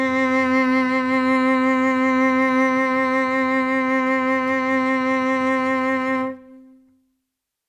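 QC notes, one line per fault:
No faults heard in this music clip.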